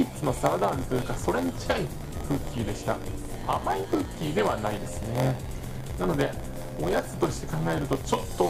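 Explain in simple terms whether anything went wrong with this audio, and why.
Something did go wrong, and it lasts the whole clip. A steady low buzz, about 86 times a second, sits under the sound, which also plays slightly slow, at about 94% of normal speed, while the character of the sound stays much the same. This is a block size mismatch (padded). One stage hands over chunks of audio that are shorter than the next stage expects, which fits a 512-sample block being read. The missing part of each chunk is filled with silence. Those tiny regular gaps make the buzz, and the added silence stretches the sound out.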